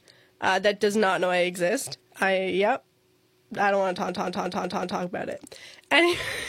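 From 4.09 to 5.02 s, just after "I don't want to" and before "about it", a system hang loop takes over: the system stalled while the sound hardware kept replaying its ring buffer, so a 0.19 s slice of speech repeats exactly five times at about 5.4 per second, which fits an 8192-sample buffer. The result is a machine-gun stutter rather than a buzz. Unlike a dropout, it leaves no silent gap, and little or no audio seems to be missing.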